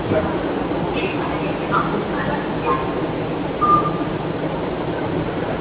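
Throughout, sustained sounds and tails sink and swell by roughly 5 dB while onsets pass, a pumping thinness from a speech noise suppressor misreading steady sound as noise, inside call audio capped near 4 kHz.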